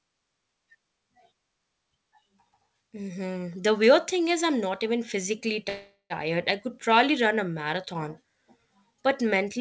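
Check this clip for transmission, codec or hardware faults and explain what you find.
One transmission fault is present, on a call path whose audio stops at 8 kHz. A call audio freeze runs from 5.69 to 6.13 s: sound stretches into a fading buzz or hiss, then about 80 ms of silence, likely from delayed packets draining the jitter buffer, and later audio runs about 0.41 s late.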